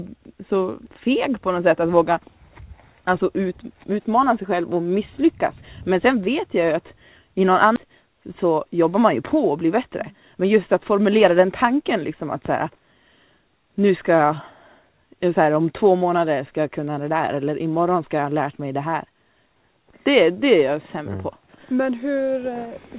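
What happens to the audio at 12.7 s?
At 12.7 s a jitter buffer speed-up is underway (7.86–13.09 s): the receiver trimmed short pitch-period slices, roughly 0.4 s in total, so the sound runs about 7% faster at unchanged pitch.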